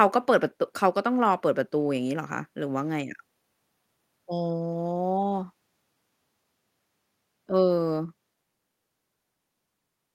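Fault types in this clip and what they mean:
No faults detected in the speech recording; nothing to report.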